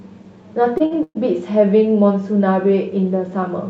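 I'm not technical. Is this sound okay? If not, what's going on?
No. This speech has two short stalls from a late packet, at 0.77 to 0.82 s and 0.86 to 0.93 s, where a sound is held about 24 ms and then 51 ms too long before the speech resumes.

From 1.03 to 1.17 s there is a call audio freeze: the last sound carries on as a buzz or hiss that fades, then about 50 ms of silence, likely caused by delayed network data. Nothing is lost afterwards.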